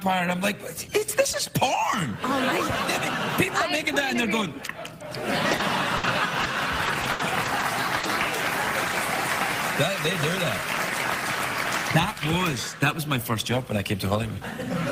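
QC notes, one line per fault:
5.51–8.05 s, repeated packet loss (robotic sound): eight separate dropouts crowd into this two-and-a-half-second stretch, totalling 280 ms of missing audio, with the longest hole about 80 ms. Each gap is bridged by stretching the preceding fragment, and about a fifth of a second is rebuilt that way, so the sound turns choppy. On a spectrogram, short smeared, repeated blocks break the normal texture; the waveform shows copied, looping segments.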